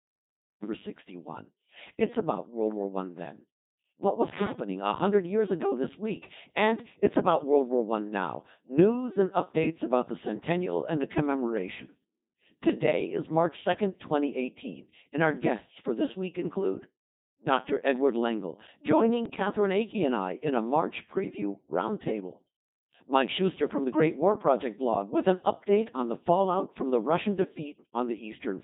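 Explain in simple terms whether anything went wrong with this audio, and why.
The speech runs through a Codec 2 vocoder the whole way. The decoder rebuilds the voice from sine waves using only pitch, loudness and tone settings, so it sounds robotic and buzzy. An ordinary low-quality codec sounds muffled or swirly instead.

There's a cut-off start: the first 0.63 s is dead digital silence, then the sound begins abruptly partway through, with no natural attack. A deliberate fade-in would rise gradually. This one simply switches on.

Bit errors on digital voice radio cause three short garbled bursts, at 4.38–4.60 s (just before "a hundred years ago"), 12.70–12.83 s and 19.26–19.40 s. Corrupted bits scramble the vocoder's pitch and tone settings, so the voice briefly jumps and warbles into bleepy gibberish. A dropout would leave silence instead.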